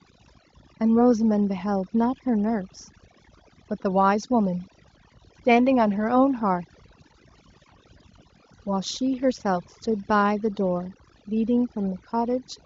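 Speech, with overdone noise removal running the whole way through. The noise reducer was pushed too hard on a noisy take, so any frequency band sitting near its noise estimate gets pulled right down or switched off. That leaves the gaps almost silent apart from little twinkling specks, and the quieter parts of the voice get dragged under too. The band stops around 7.6 kHz, which fits a high-rate HD Voice call, and the codec itself adds little or no roughness.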